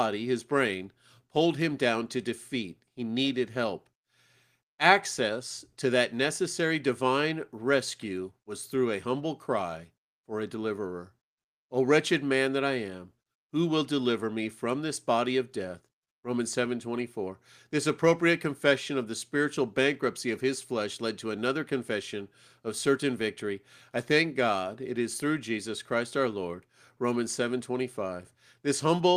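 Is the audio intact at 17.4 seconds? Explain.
Yes, at 17.4 seconds the speech plays through intact with no audible fault.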